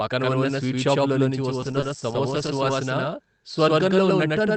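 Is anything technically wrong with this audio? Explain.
Yes, three things stand out.

The whole clip has a doubled audio track: the speech is there twice, with a second full-band copy trailing about a tenth of a second behind at roughly the same level. It's likely from the audio being captured again through a slower path, or an edit leaving two copies out of step. Since the copy has no decay or room colour, it doesn't sound like reverb. It's a hard, flat slap-back echo on every syllable.

From about 1.62 s to 2.68 s, right after "పక్కన ఉన్న స్వీట్ షాపులోంచి", there's a run of lost packets rebuilt from error correction: 21 separate 20 ms frames, spaced every 40 to 120 ms or so. Each lost packet was recovered from the lower-quality backup copy carried in the next one. That means no gaps, but that stretch turns grainier and rougher while the burst lasts.

In the middle of that run, at about 1.80 to 1.84 s, there's one short concealed packet loss where 20 ms never arrived at all. 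The decoder bridged it by extending the preceding sound and then fading back into the real signal, so you get a brief smear or wobble rather than a dropout. The call codec itself, with its band limit around 8 kHz, sits underneath all of this.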